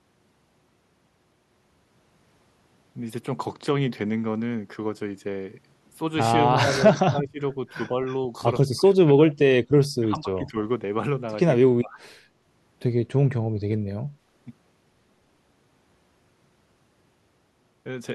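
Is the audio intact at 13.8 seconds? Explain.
Yes, at 13.8 seconds the speech runs intact, with no dropout, click, distortion or other fault audible at that moment.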